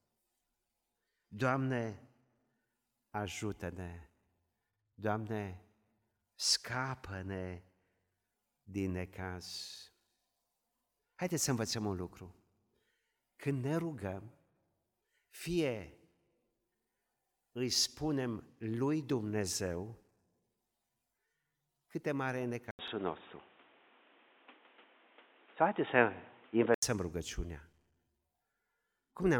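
Overlapping chunks produce a brief stutter in this speech at 4.73, 10.78, 16.83, 22.88 and 28.93 s. Each 6-second chunk starts before the previous one has finished, so about 48 ms of sound plays twice at every join. From 22.71 to 26.82 s, after an 80 ms gap, the speech turns dull and boxy, with nothing above 3.8 kHz, a level shift of roughly 5 dB, and new background noise about 30 dB below the voice. The likely cause is an input switched to a poorer device.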